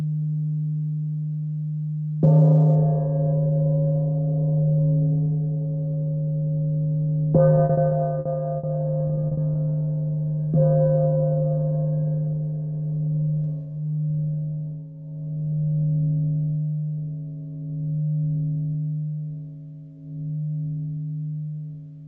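Repeated packet loss (robotic sound) breaks up the audio from 7.55 to 8.65 s and again from 9.07 to 9.57 s. Each stretch has about half a dozen short dropouts, up to 60 ms and 40 ms long, filled by extending the previous sound. The result is choppy. On a spectrogram, the harmonics smear flat across each gap; the waveform shows repeated, looped-looking segments. The call-codec audio above and below is band-limited at 8 kHz.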